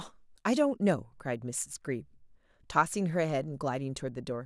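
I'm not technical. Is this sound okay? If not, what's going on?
Yes, nothing sounds wrong with this speech recording.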